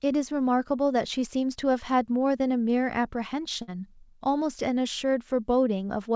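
Speech over a call link whose content stops at 8 kHz, with a burst of packet loss from 3.62 to 3.70 s: about 56 ms of concealment smears the last sound into a fading held band on the spectrogram, then about 60 ms of audio is skipped.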